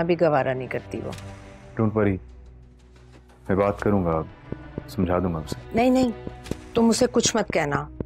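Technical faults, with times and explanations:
4.52–8.02 s, train of clicks: a steady ticking kicks in at 4 clicks per second, evenly spaced, about fifteen in all, each alike and roughly 10 dB above the sound, so they pop through gaps too. Likely interference from nearby gear or a faulty connection or power supply.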